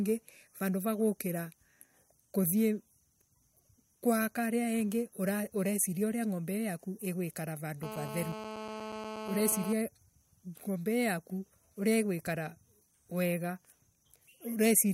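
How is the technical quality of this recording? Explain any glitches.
The recording has one clear glitch. From 7.83 to 9.73 s, GSM phone buzz cuts across the speech. A nearby 2G phone on a call transmits bursts 217 times a second. The audio circuit rectifies them. The result is a steady, harsh, raspy buzz with many harmonics, about 9 dB below the speech and unrelated to it.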